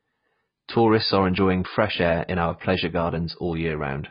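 From start to end the speech sounds dull and smeared, with nothing above 5.1 kHz and a warbling, fizzy texture on sustained sounds and sibilants. The likely cause is heavy AAC compression, which fits AAC-LC at around 16 kbps: the encoder lowers its cut-off and starves detail.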